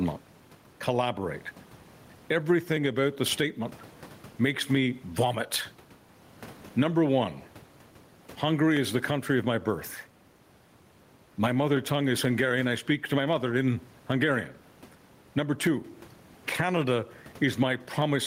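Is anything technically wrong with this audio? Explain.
Yes. Throughout the speech there is gain pumping: the gain is pushed down whenever the talker gets loud, swinging by roughly 10 dB. The likely cause is input gain set far too high, with a fast limiter or compressor clamping each loud syllable. The peaks are pulled in, and loud and quiet passages end up squashed together. The room noise, about 35 dB below the speech, is part of the recording rather than a fault.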